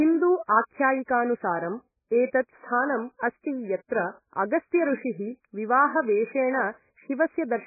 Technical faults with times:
0.00-7.66 MP3 compression

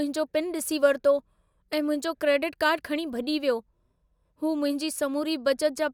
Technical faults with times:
none

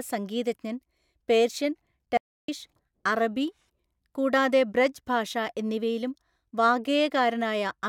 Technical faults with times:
2.17-2.48 audio dropout to silence

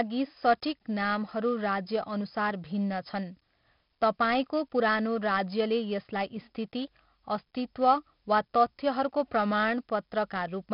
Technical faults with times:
0.00-10.73 4-bit ADPCM compression

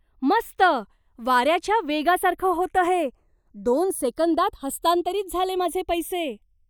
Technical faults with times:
0.00-6.69 channels drifting apart

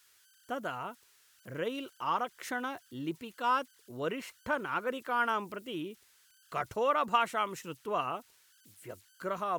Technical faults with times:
0.00-9.59 converter idle tones

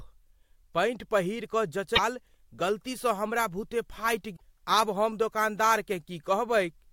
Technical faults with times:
1.92-1.99 damaged data in a compressed stream
4.32-4.42 damaged data in a compressed stream

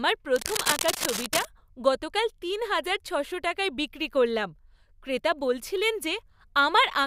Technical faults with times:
0.36-1.48 cable scratch noise

